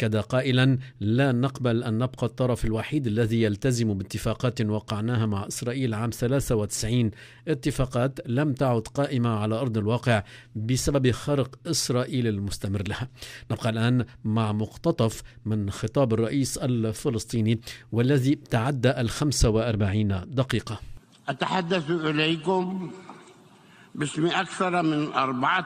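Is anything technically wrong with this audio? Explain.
Yes. From 19.45 to 20.45 s there is channel delay with comb filtering. One channel lags the other by roughly two samples, and summing them to mono cancels shared content at evenly spaced frequencies. The first notch sits around 10 kHz, so the top end sounds dull.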